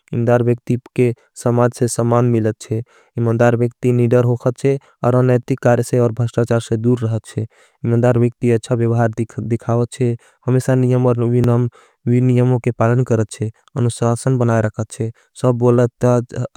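At 5.43 s, between "वेक्ति निदर होगाच्छे और" and "कारे से और भाष्टाचार", and again at 11.44 s, overlapping chunks replay about 12 ms at each 6-second join, heard as a brief click-stutter.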